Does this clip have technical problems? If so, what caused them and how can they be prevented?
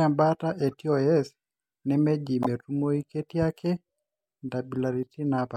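Yes. Corrupt frame decoded: flipped bits in compressed frames reached the decoder, which played them anyway, placing energy at wrong frequencies. This causes a faint glitch at 0.72–0.74 s and a much louder glitch at 2.43–2.46 s in this speech. Preventing it means adding checksums or error detection so damaged frames are concealed rather than decoded.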